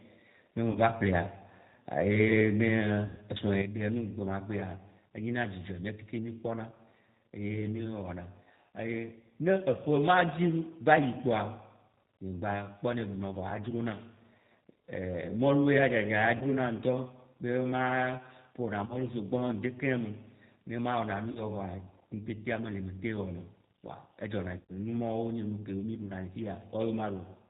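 Throughout, the speech has the slightly rough, synthetic, band-limited sound of the G.729 codec. Nothing comes through above 4 kHz, and the pulse-based excitation leaves a buzzy graininess rather than the swirly, smeared highs of a perceptual music codec. This fits an 8 kbit/s G.729 stream.

At 0.71 to 0.79 s, the first VoIP packet loss concealed by the speech codec appears. About 40 ms of audio is missing. The decoder repeats its last pitch and filter, so the gap is filled with a stretched, fading sound, and the voice stays weak just afterwards. This is different from a plain dropout, which would be silence or a hard click.

A longer loss follows at 3.06 to 3.21 s, with about 120 ms missing. The concealed sound is drawn out further before it fades.

At 3.62 s, sound and background noise drop together by about 8 dB in a single step, with no ramp, and stay at the lower level to the end. 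This is a sudden gain jump. It is likely caused by a gain setting applied without smoothing. It is not a fade, and it is not automatic gain control pumping.

Further concealed losses, each about 40 ms, occur at 16.37 to 16.46 s, 18.86 to 18.98 s and 21.31 to 21.41 s. A last loss of about 100 ms occurs at 24.59 to 24.72 s.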